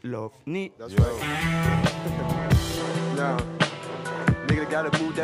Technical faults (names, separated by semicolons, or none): input switched to a poorer device